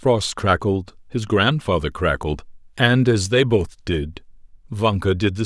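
Speech recording with no technical faults to report anywhere in the clip.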